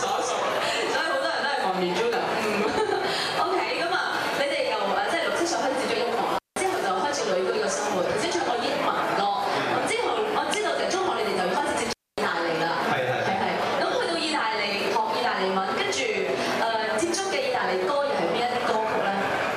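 Intermittent contact at 6.35 to 6.59 s and again at 11.85 to 12.19 s: a loose cable or plug briefly breaks the connection, dropping the sound for about 177 ms and then 248 ms, with crackle at each edge and faint hiss during the gaps.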